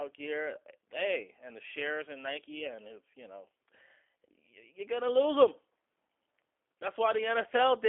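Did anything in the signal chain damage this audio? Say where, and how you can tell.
Yes, at the codec stage: the G.729 codec degrades the speech for the whole clip. Nothing comes through above 3.5 kHz, and the band sits roughly between 300 Hz and 3.4 kHz. The voice has a plainly audible rough, synthetic edge, which fits an 8 kbit/s G.729A stream that rebuilds each 10 ms frame from a vocal tract filter, a pitch predictor and a few pulses. A plain telephone band-limit would keep the voice smooth. This buzzy, rebuilt texture marks a CELP codec.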